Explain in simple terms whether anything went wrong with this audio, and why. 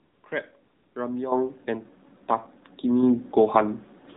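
The whole recording sounds boxed-in and buzzy, as if heard over an old mobile phone. The speech lacks crispness and has a synthetic, robotic edge. This is the AMR narrowband mobile codec at work. It keeps nothing above 4 kHz, so the airy high sounds are gone. Instead of sending the real waveform, it rebuilds the voice from a simple model of the throat, and at the low quality setting used here that rebuilding is plainly audible.

Twice the background turns into a smooth, even hiss that switches on and off: from the very start to 0.24 s, and again from 0.64 to 0.96 s. This is AMR comfort noise. During those moments the phone decided nobody was talking and stopped sending speech. The receiving end filled each gap with made-up noise based only on a rough idea of the background's loudness and tone, so the real surroundings briefly disappear.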